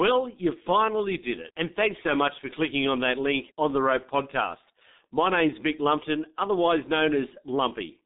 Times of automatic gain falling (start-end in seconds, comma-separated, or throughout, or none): none